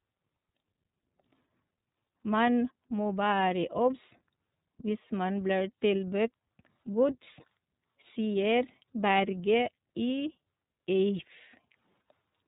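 From start to finish the speech carries the sound of the iLBC codec, with damage that is plainly audible: a slightly rough, synthetic edge on every syllable, and no air or sibilant sparkle, since nothing above 3.8 kHz survives. Each 30 ms block has its excitation coded independently of the last, a framing that fits a rate of about 13.33 kbps. On a spectrogram the energy stops at a flat ceiling near 3.8 kHz.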